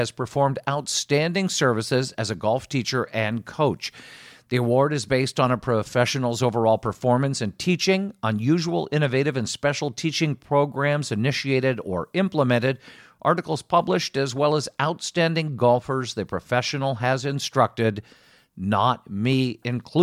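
No technical faults can be heard anywhere in the recording.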